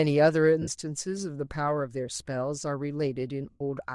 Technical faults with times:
0.00-3.95 Bluetooth LC3 compression
0.62-0.69 lost LE Audio frames
3.50-3.61 lost LE Audio frames

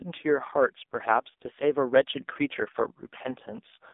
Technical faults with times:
0.00-3.94 AMR narrowband mobile codec

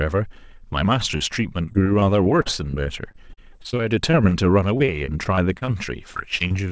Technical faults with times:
1.18-1.22 short concealed packet loss
1.66-4.33 repeated packet loss (robotic sound)
4.77-5.69 repeated packet loss (robotic sound)
6.13-6.54 repeated packet loss (robotic sound)

